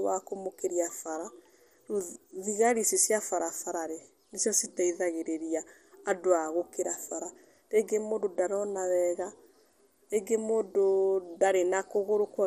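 From start to finish the speech carries MP2 compression damage, likely from MPEG Layer II coding at a low rate, with the dullness pointing to something around 64 kbps. Too few bits reached the upper sub-bands, so the top end sounds veiled and the remaining detail has a gurgling, granular roughness. On a spectrogram nothing appears above 14.9 kHz, and the upper bands below that edge flicker in blocky patches as sub-bands switch on and off.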